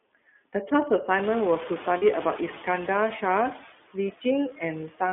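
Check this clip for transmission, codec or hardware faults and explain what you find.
Five faults are present, three running through the whole speech clip and two at specific moments.

Hard clipping runs throughout. Peaks overdrive the signal path by about 5 dB, so a small fraction of samples are cut flat. This adds harsh crackle on loud syllables, seen as flat-topped waveform peaks.

Noise suppressor artifacts are present throughout. The suppressor lowers noise-dominated bands by about 17 dB, so background sinks between words and swells beneath them.

The iLBC codec is plainly audible throughout. The line passes only 250 Hz to 3.5 kHz, and coding each 20 ms frame independently gives rough, synthetic speech. The spectrogram is empty above 3.5 kHz, which fits that narrow line; the codec runs at 15.2 kbps.

Lost iLBC frames occur from 1.98 to 2.04 s. About 40 ms are missing, which fits two lost frames. 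The decoder repeats the last pitch cycle, giving a brief buzzy held vowel, seen as flat, repeated harmonic striping.

Speech cut by the noise suppressor occurs from 4.51 to 4.62 s. Roughly 100 ms of speech is treated as noise and pulled down by about 10 dB. It sounds swallowed and faint, a visible dip in the waveform envelope.

The room noise that rises near 1 s stays about 15 dB below the speech.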